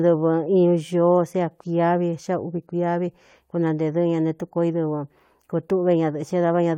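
No technical faults can be heard anywhere in this speech recording. Nothing in the signal chain calls for comment at any point.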